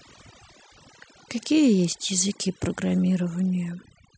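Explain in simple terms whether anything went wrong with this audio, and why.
Overdone noise removal runs throughout: a too-strong noise reduction tool cut quiet parts of the speech, leaving twinkling specks.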